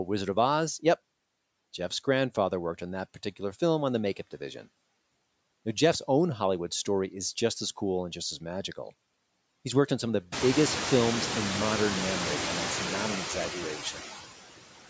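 Noise suppressor artifacts run through the whole clip. The suppressor estimates the steady background and pulls it down by about 18 dB, frame by frame. Between phrases the background drops away. Under the speech it comes back up, so the noise floor pumps with the voice. This is most exposed after about 10.5 s. There the room noise rises by about 24 dB, to roughly 10 dB below the speech.

Speech cut by the noise suppressor occurs from 13.78 to 13.99 s, right after "and that's not an". Here the suppressor mistook part of the speech for noise. It turned it down along with the background, by up to about 9 dB. Around a tenth of a second of sound is affected. That stretch sounds swallowed and faint. Nothing is heard above 8 kHz, which fits the call microphone processing.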